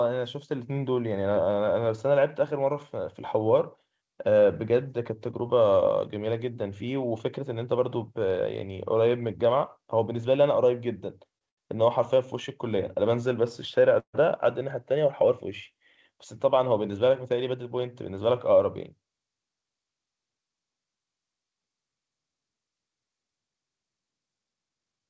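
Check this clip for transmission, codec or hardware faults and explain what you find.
Three kinds of transmission fault appear in the speech, all from delayed packets meeting the jitter buffer. The G.722 call codec at 64 kbps leaves nothing above 8 kHz.

Short stalls from a late packet occur at 11.38 to 11.43 s and 11.49 to 11.59 s. Packets arrived late, the jitter buffer emptied, and the receiver stretched the last sound for 27 ms, then 84 ms. Nothing is lost, but the sound hangs briefly with a faint buzz or dip.

A call audio freeze runs from 13.99 to 14.15 s. The buffer likely ran dry while packets were held up in transit, so the receiver extended the last sound for 141 ms. It fades into about 80 ms of silence, then resumes where it stopped.

A jitter buffer speed-up spans 24.53 to 25.07 s. With excess audio queued, the receiver trimmed pitch-period slices repeatedly, roughly a tenth of a second in total. 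The speech plays at 115% speed with unchanged pitch and sounds hurried.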